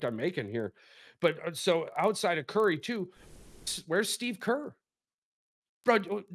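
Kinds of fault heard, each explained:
Resampler restarted on every block, throughout the speech: the conversion from 48 kHz down to 24 kHz was done on 40 ms chunks treated in isolation, so the filter at each chunk boundary worked from missing or wrong neighbouring samples instead of the true continuation. Each boundary leaves a small discontinuity, and at 25 per second these form a steady low buzz riding under the speech, present while sound is active and falling away in the gaps.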